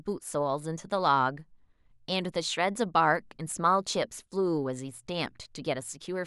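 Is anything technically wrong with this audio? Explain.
Yes. The speech carries CD scratch ticks between 3.16 and 3.63 s: four short clicks, the longest well under a millisecond, spaced roughly six per second. A surface scratch wipes out more data than the disc's error correction can reconstruct, and it does so once per revolution. The player then interpolates or mutes the damaged samples, so each pass over the blemish leaves a brief tick or micro-dropout at a steady rate.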